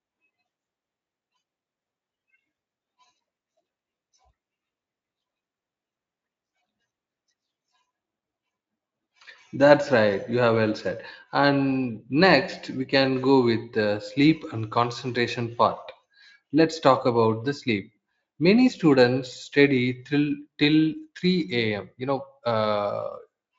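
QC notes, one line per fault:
No faults are heard anywhere in the speech. The Speex codec path works normally, with content stopping at about 7.7 kHz and the coding leaving at most a faint trace on the sound.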